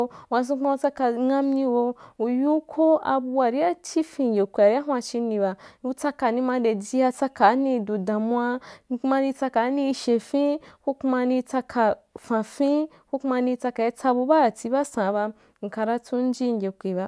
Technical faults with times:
none

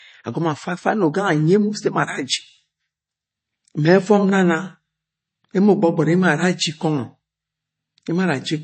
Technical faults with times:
0.00-8.63 MP3 compression

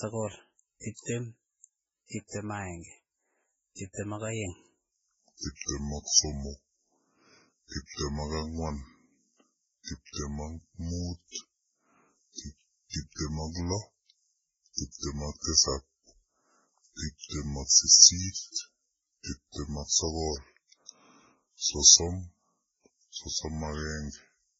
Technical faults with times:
0.00-24.59 transcoding between lossy codecs
4.92-24.59 section at the wrong speed

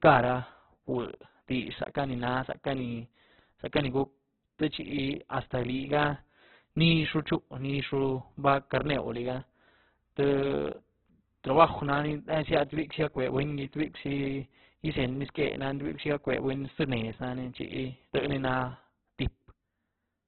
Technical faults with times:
0.00-20.28 Opus compression

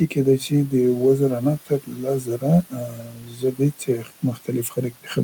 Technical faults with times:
0.07-5.09 speech cut by the noise suppressor

